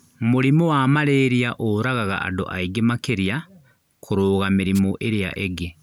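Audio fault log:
4.74–4.80 s wireless microphone noise hit: a roughly 50 ms static swish as cancelling radio reflections faded the FM signal, letting receiver noise briefly cover the speech.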